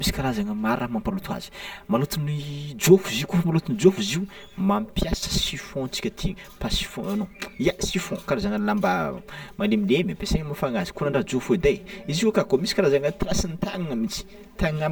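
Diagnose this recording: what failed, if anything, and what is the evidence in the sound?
Buffer-stage channel delay (comb filtering), throughout the speech. It sounds hollow. One channel lags roughly 5 ms, so the mono sum notches evenly from about 100 Hz.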